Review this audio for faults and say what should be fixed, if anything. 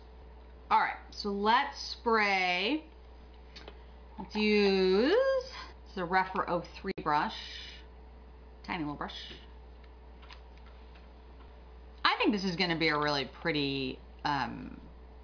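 Nothing needs fixing; no faults can be heard here.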